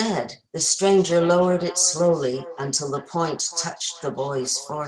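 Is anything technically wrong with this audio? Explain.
Yes. From 0.64 s to the end, there is feedback echo between two devices. Two devices in one room share the call. One plays the other's microphone signal, and that microphone picks it up again. Neither echo canceller removes it. The sound returns roughly every 400 ms, thinner and more ringing, peaking at about 18 dB below the speech.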